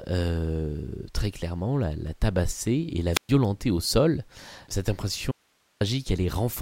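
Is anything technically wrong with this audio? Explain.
Yes. At 3.12 s a short burst of rising hiss gives way to a hole of near silence lasting about 120 ms, with the speech returning by 3.29 s. This is a wireless microphone squelch dropout: the analogue FM radio link faded until the receiver's squelch muted the output.

From 5.32 to 5.81 s the speech cuts out abruptly for about half a second, leaving only hiss roughly 40 dB below the normal level, then snaps back. This is an audio dropout to a faint residue, likely from the signal being lost while the downstream path stayed live.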